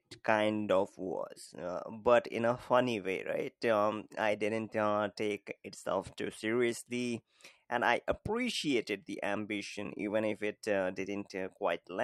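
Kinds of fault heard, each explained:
No technical faults can be heard anywhere in this speech recording. There is nothing to list.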